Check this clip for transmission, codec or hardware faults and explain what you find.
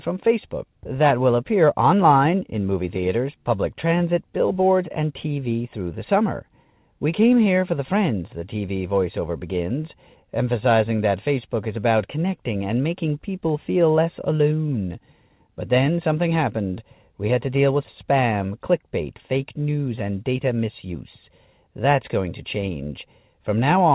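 No transmission, codec or hardware faults turn up in this speech clip. It has passed through a call path that is working as intended, with nothing above 4 kHz and a narrowband telephone character that fits G.711 mu-law coding at 64 kbps.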